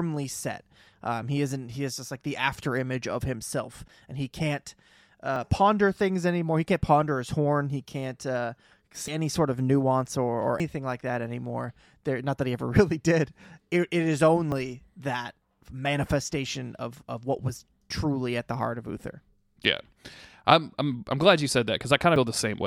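Dropped buffers (overruns) at 5.36, 9.08, 10.6, 14.52 and 22.16 s break up the speech with small forward jumps, with no gap of silence. The likely cause is the capture side not reading its buffer before new audio overwrote it, so the two sides are spliced together. The jumps before "ponder things anymore" and after "did it it is" lose a few hundredths of a second. Those at 9.08 and 10.6 s, the latter between "of nuance or or" and "like that anymore", lose about a tenth, and the one at 22.16 s loses about 70 ms.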